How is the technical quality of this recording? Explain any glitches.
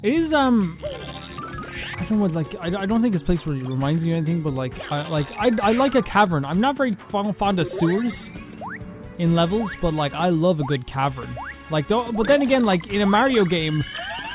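No glitches are audible anywhere in the recording, so there is nothing to explain.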